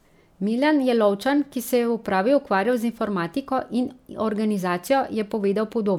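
No technical faults are audible anywhere in this speech.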